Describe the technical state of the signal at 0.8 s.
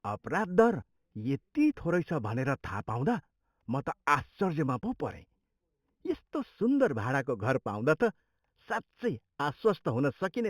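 At 0.8 s the speech shows imaging from linear upsampling, present throughout. The rate was raised from 8 kHz to 44.1 kHz by straight-line interpolation, which dulls the top of the band and leaves a mirrored copy at 4 to 8 kHz, roughly 30 dB down, heard as faint metallic shimmer on sibilants.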